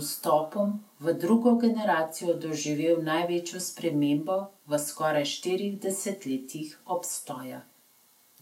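No technical faults are audible.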